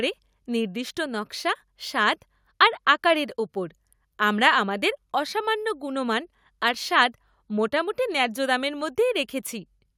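Speech recording with no audible technical faults.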